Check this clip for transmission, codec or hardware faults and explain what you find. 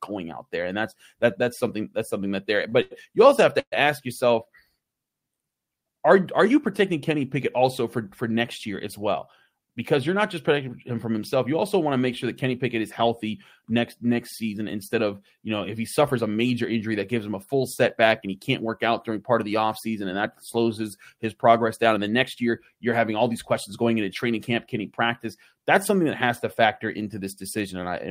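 The speech has network delivery faults: two short stalls, one call audio freeze and two jitter buffer speed-ups.

Short stalls from a late packet occur at 2.69–2.74 s and at 2.82–2.93 s, the second just after "that's something that there" and before "you also have". The jitter buffer ran dry. The receiver held the last sound for 27 ms, then 87 ms. Nothing is lost. The sound just drags briefly.

A call audio freeze runs from 3.60 to 3.74 s, after "you also have" and before "ask yourself". The cause is likely packets held up in transit. The last sound was stretched, then faded to silence for 70 ms. The audio resumes where it stopped.

Jitter buffer speed-ups run from 9.48 to 10.90 s, after "next year as well" and before "from himself", and from 21.88 to 22.50 s. The buffer had built up excess audio. The receiver cut tiny pitch-period slices to shrink it, removing about a tenth of a second, then about half that. 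The speech plays 6% and 7% fast at unchanged pitch and sounds hurried.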